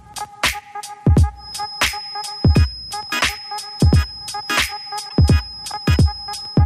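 From 1.34 s to the end, a thin, steady tone at 5.1 kHz sits behind the sound, about 15 dB below it, swelling and fading slowly in level without building up. This is a feedback whistle. The likely cause is a loudspeaker-to-microphone loop running just short of instability, where the gain around the loop at that one frequency is close enough to unity that the tone keeps ringing but never runs away into a howl.

Between 5.06 and 5.13 s, a brief glitch cuts across the audio. This is damaged data in a compressed stream. Part of the encoded data at this point is corrupt, so the decoder misreads or rejects those frames, loses synchronisation, and hunts for the next valid frame header.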